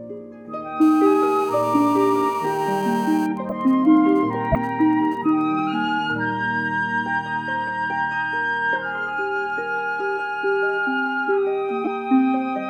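From 0.81 to 3.27 s a GSM phone buzz sits about 19 dB below the sound: a nearby 2G handset in a call pulses 217 times a second, and the audio circuit rectifies those bursts into a hard, raspy drone. A spectrogram shows evenly spaced horizontal lines at 217 Hz and its harmonics.

From 3.37 to 5.42 s the steady buzz gives way to GSM signalling bursts, the handset transmitting only intermittently while its user is silent in the call. They are roughly 30 dB down, even ticks with a longer 217 Hz buzz twice a second, visible as short clusters of vertical striations.

Corrupt frames decoded appear at 3.49 to 3.52 s, 4.52 to 4.56 s, 5.58 s and 11.84 to 11.88 s, where flipped bits made the decoder misplace energy. Each is a chirp or blip, the one at 4.52 s strongest, peaking around -5 dBFS. Each shows as a brief smear of misplaced energy on a spectrogram and a sudden spike in the waveform.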